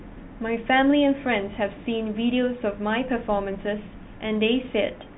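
No technical faults can be heard in the speech, which comes through a G.711 telephone path with nothing above 3.9 kHz.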